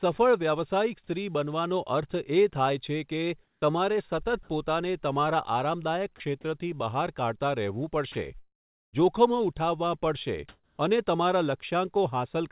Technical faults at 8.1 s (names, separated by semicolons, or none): sound dropped by the voice detector